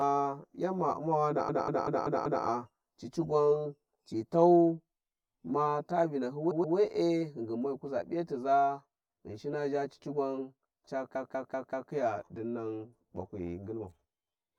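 Channel delay (comb filtering) runs through the whole speech clip. One channel trails the other by roughly 10 ms, and when the two are summed to mono the shared content cancels at evenly spaced frequencies, starting somewhere around 40 Hz. Those fixed notches strip out parts of the spectrum, so the voice sounds hollow and phasey from start to finish rather than at any single moment.

Repeated frames first appear from 1.49 to 2.45 s, just before "cici gwan ci tau". A 192 ms stretch of compressed audio plays five extra times, adding 960 ms and producing a stuttering loop. From 6.51 to 6.77 s a 128 ms block plays two extra times, adding 256 ms. After "zha cici gwan ca", from 11.15 to 11.92 s, a 192 ms block plays four extra times, adding 768 ms.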